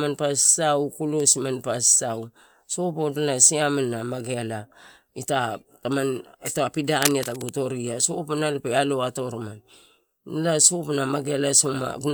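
From 6.96 s to 7.50 s, cable scratch noise rides over the speech: a dense, irregular rustling and scratching lasting about half a second, only slightly quieter than the speech itself. It is likely a worn cable or connector being moved, its contact resistance jittering and injecting uneven noise bursts. Unlike isolated clicks or a steady hum, the bursts cluster tightly and vary in strength.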